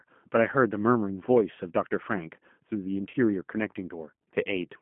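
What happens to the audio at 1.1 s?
At 1.1 s you're hearing G.729 codec damage, and it runs through the whole clip, not just that moment. The speech is squeezed into a 150 Hz to 3.4 kHz line band and rebuilt from a filter, pitch predictor and sparse pulses, which fits an 8 kbit/s stream, so it comes out thin, rough and plainly synthetic.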